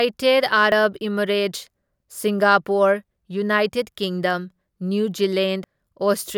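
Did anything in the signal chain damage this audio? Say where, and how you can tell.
Yes. Abrupt forward jumps at 0.72 s, 1.56 s and, longer, 5.64 s after "ꯀꯤꯡꯗꯝ ꯅ꯭ꯌꯨ" likely mean dropped buffers (overrun) in the driver, which overwrote unread audio before the program collected it.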